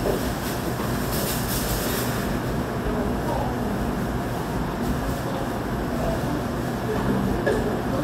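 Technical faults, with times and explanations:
No technical faults are heard in these sounds.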